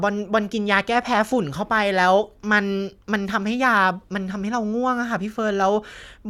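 No technical faults can be heard in this recording.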